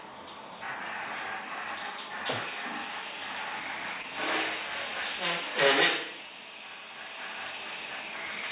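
At around 4.02 to 4.05 s there's a short concealed packet loss: roughly 20 ms of audio didn't reach the decoder in time, and the receiver covered about 14 ms of that gap by carrying the previous sound forward before blending back into the real signal. You hear it as a quick smear or wobble where the sound briefly loses its detail. It sits inside a narrowband call path with nothing above 4 kHz, which fits G.711.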